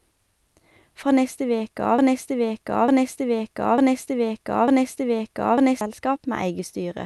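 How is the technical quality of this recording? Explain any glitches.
One significant glitch: a broken-record loop from 1.98 s to 5.81 s, where a 0.9 s piece of speech repeats four times back to back. This is likely a stalled player or stream resending its last buffered fragment, so the speech that should have played during those seconds is lost. The call-codec path can be heard as coding noise, with the high end cut off above 12 kHz.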